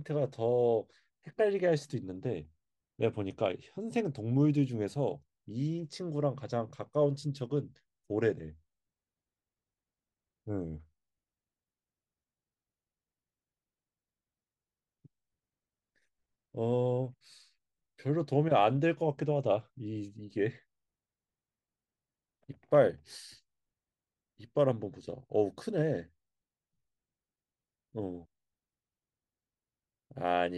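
No technical faults can be heard anywhere in the recording.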